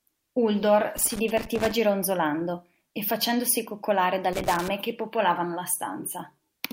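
At 0.97 to 1.72 s and again at 4.33 to 4.68 s, the speech breaks into loose connector crackle: a dirty contact rapidly making and breaking, leaving scratchy, irregular bursts.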